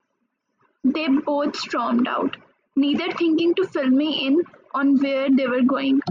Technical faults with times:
none

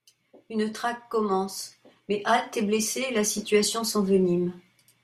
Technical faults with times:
none

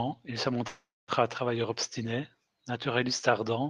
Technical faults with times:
0.67-1.11 call audio freeze

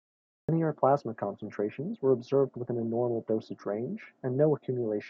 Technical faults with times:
0.00-0.49 cut-off start

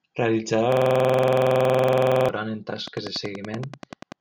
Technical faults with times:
0.72-2.29 system hang loop
2.88-4.13 train of clicks

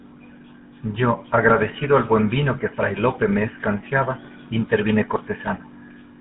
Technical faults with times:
0.00-6.20 GSM full-rate codec

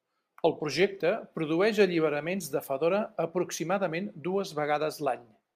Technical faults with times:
0.00-5.56 sample clock jitter

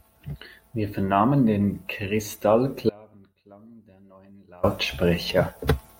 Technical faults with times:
2.89-4.63 audio dropout to a faint residue

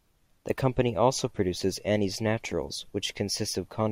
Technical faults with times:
none

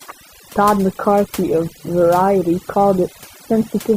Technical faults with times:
0.00-3.97 overdone noise removal

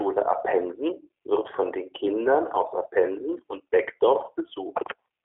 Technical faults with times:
0.00-5.25 G.729 codec

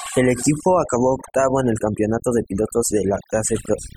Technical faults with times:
0.00-3.96 overdone noise removal

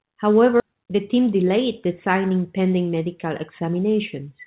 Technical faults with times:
0.60-0.68 skip ahead
1.17-1.58 jitter buffer speed-up

